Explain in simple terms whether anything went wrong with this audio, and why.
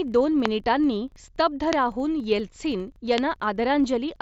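Yes, several things went wrong. A filter restarted on every block: it lost its memory and began each chunk of sound from silence, so a 25-per-second buzz runs throughout, rising and falling with the speech's loudness.

Three loud pops, each a single sharp crack well above the speech, land at about 0.46, 1.73 and 3.18 seconds. They are likely electrical jolts, such as a plug, switch or static spark, while the speech continues underneath.

At 3.06 seconds there was concealed Bluetooth headset packet loss. About 15 milliseconds of sound never arrived from the headset, so the phone filled the gap by repeating recent sound, leaving a brief buzzy tone.

The headset's mSBC Bluetooth codec adds only a light grainy edge on louder moments.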